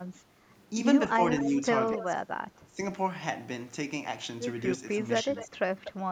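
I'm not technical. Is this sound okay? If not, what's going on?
No. Echo leak shows up at 1.38 to 1.43 s, 1.93 to 2.04 s, 5.36 to 5.48 s and 5.84 to 5.92 s: short, faint, ghostly repeats of the speech, each arriving about a quarter of a second (248 ms) after the original. This is likely a person on the far end using a loudspeaker whose echo canceller missed some of the sound, so their microphone sent your side's voice back to you.

Speech suppressed in double talk happens at 2.16 to 2.23 s, 2.68 to 2.78 s and 5.24 to 5.54 s. The speech briefly drops in volume or turns thin for a split second. The likely cause is both sides talking at once. The same echo canceller couldn't tell real speech from leftover echo, so it turned everything down for a moment.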